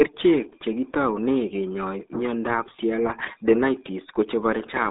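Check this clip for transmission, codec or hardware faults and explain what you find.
The speech carries one codec fault from start to finish, the RealAudio 14.4 codec. Its heavy low-rate damage leaves the voice muffled and gargly, which fits a dial-up-era coder working at about 8 kbit/s. The usable band runs roughly 250 Hz to 3.7 kHz, with nothing above 3.8 kHz. Unlike a plain telephone band-limit, which sounds narrow but clean, this adds a bubbling, smeared texture, because the coder models rather than transmits the waveform.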